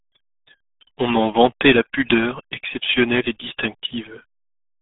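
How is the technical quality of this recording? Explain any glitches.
Pretty rough, honestly: the whole clip has gone through the RealAudio 14.4 codec, and it shows from start to finish. Nothing survives above about 3.8 kHz, and the usable band sits roughly between 150 Hz and 3.6 kHz, so the speech comes across muffled and gargly. That heavy damage points to something like an 8 kbit/s dial-up-era speech codec squeezing the signal hard.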